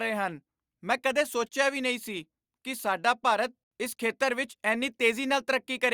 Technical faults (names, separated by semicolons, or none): none